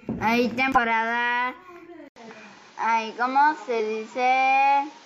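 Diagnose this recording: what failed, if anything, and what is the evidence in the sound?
The codec stage dropped whole compressed frames, so the playback skips ahead at 0.72 to 0.78 s, 2.28 to 2.32 s and 3.76 to 3.80 s, losing roughly 50, 70 and 20 ms.

At 2.08 s there's an 80 ms gap. After it the audio has nothing above 7.6 kHz, and a new noise floor sits about 30 dB down at much the same level. The likely cause is the input switching to a poorer device.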